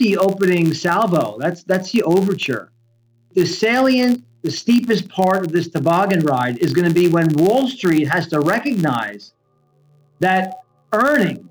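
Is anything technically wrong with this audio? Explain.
Yes. Throughout, a steady buzz at 86.1 Hz tracks the level of the sound, from a filter restarted on every block, which fits a 512-sample block, so each block starts with a small transient.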